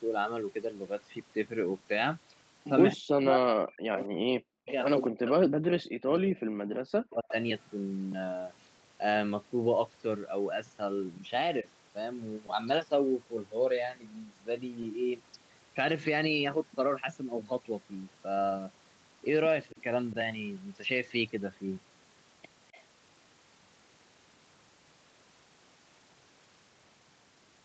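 From 3.02 to 4.7 s the talker keeps dipping and dropping out, as deep as about 40 dB, for roughly one and a half seconds in total. That's speech suppressed in double talk, most likely the echo canceller hearing both sides at once and turning everything down. Inside that stretch, at 4.0 to 4.07 s, there's a faint scrap of echo leak: a copy of the voice trailing by 265 ms, about 20 dB under the speech. It's likely the far end's loudspeaker getting past its own canceller.

From 5.08 to 7.35 s the suppression comes back, again cutting in as deep as about 40 dB, for around two seconds altogether.

At 12.46 to 12.49 s there's a short concealed packet loss. About 20 ms of audio never arrived, and the decoder papered over it by stretching the last sound. You hear a tiny smear or wobble. A second, smaller one at 14.82 to 14.84 s fills about 10 ms and is an even briefer smear.

At 19.72 to 19.77 s the voice ducks slightly, about 10 dB, from the same double-talk suppression. 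Right after, from 19.77 to 19.83 s, comes another echo leak, the same 265 ms-delayed copy but quieter, about 30 dB down. It recurs at 22.72 to 22.83 s, a faint ghost of the voice. All of this sits inside the Opus call path's 8 kHz top end.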